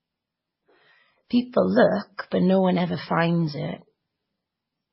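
Throughout the speech, nothing sounds above 5.6 kHz, which a spectrogram would show as a flat ceiling across the whole clip. This points to transcoding between lossy codecs, likely a very low-bitrate MP3 re-encoded as WMA, with both sets of artefacts heard together.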